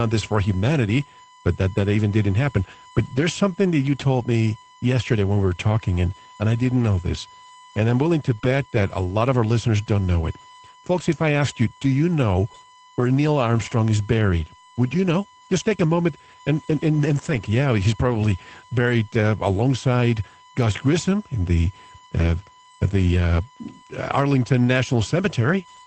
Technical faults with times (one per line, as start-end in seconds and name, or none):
0.00-25.86 USB whine
11.31-11.33 lost packet rebuilt from error correction
13.67-13.73 lost packet rebuilt from error correction
17.13-17.35 lost packet rebuilt from error correction
22.19 lost packet rebuilt from error correction